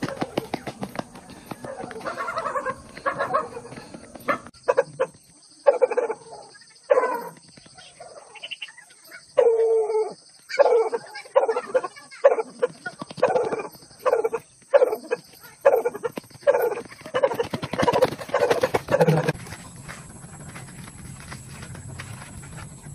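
Nothing in this audio stands out as a technical problem; it just runs along steadily with no glitches, dropouts or odd noises anywhere.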